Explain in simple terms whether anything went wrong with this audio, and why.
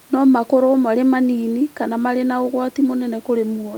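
Nothing went wrong here.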